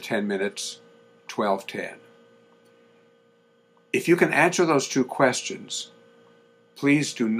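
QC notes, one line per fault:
No fault to log in these QC notes.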